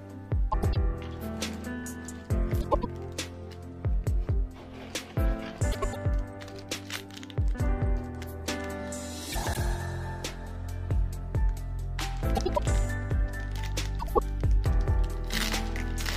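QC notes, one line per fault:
0.52–0.76, 2.61–2.85, 5.72–5.96, 9.32–9.57, 12.35–12.60 and 13.998–14.19 s, frames out of order: each stretch comes out as a brief garbled flutter. Two neighbouring blocks of audio were decoded in swapped order, so the later block plays before the earlier one. The blocks are about 105 ms long, or about 78 ms in the last event. No time goes missing.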